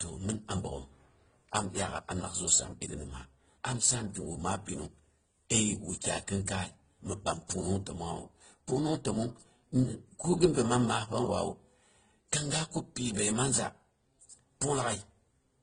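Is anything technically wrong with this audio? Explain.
Yes. Throughout the clip, the speech carries artefacts of transcoding between lossy codecs. Nothing is present above about 9.7 kHz, and several distinct kinds of coding damage sit on top of one another. This is likely the result of a low-bitrate encode that was decoded and re-encoded more than once. Each later encoder wasted bits reproducing the earlier artefacts and added its own. The lowest band limit in the chain survived, so the top end stays dull and the different artefacts are heard together.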